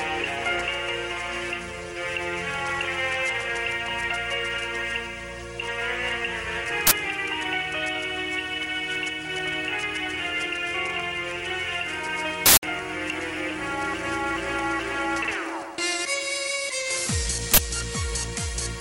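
Uninitialised buffer faults at 6.87–6.91 s, 12.46–12.63 s and 17.54–17.58 s: blocks reached the output before any audio was written, so stale memory played as samples. The short ones are loud cracks and the longer one a harsh burst of digital noise, lasting 43, 170 and 43 ms, consistent with 2048- and 8192-sample buffers.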